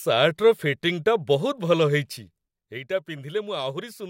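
Between 2.02 and 2.97 s there is zipper noise. The speech level falls by roughly 10 dB in unsmoothed 3 dB steps, about three per second, and each step leaves a small tick. The waveform envelope drops like a staircase, and a spectrogram shows faint vertical broadband lines at every step.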